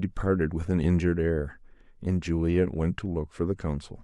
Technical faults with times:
2.90-2.93 corrupt frame decoded

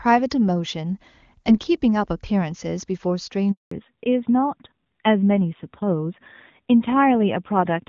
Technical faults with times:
3.51-3.71 handover gap
3.71-7.89 fallback to narrowband

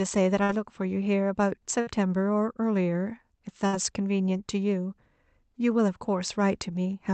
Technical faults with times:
0.43-0.52 burst of packet loss
1.81-1.90 burst of packet loss
3.67-3.76 burst of packet loss

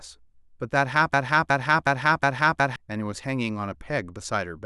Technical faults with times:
1.14-2.76 broken-record loop

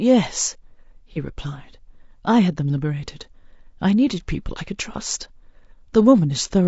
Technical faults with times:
0.00-6.67 low-delay AAC compression
1.12-1.17 AAC frame loss with concealment

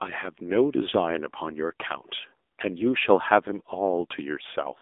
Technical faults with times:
0.00-4.81 AMR narrowband mobile codec

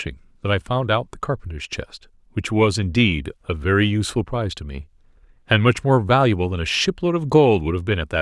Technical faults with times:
none

